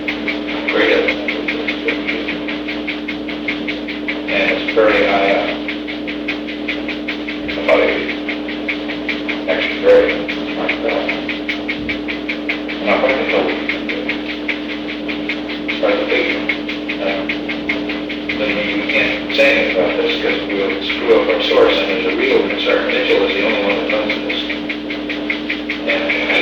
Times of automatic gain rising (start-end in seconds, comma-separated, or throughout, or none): none